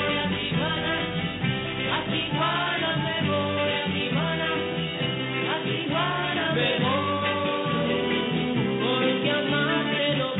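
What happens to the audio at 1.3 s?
A ground loop or nearby transformer is coupling the 50 Hz power line into the signal, so at 1.3 s there is mains hum, running from the start to 2.31 s. It sounds like a steady low drone with some low harmonics, sitting only a few decibels below the wanted sound.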